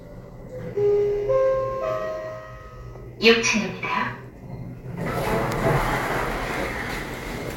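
No technical faults occur at any point in the sound.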